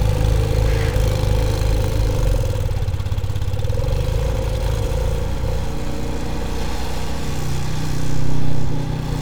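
No technical faults are audible.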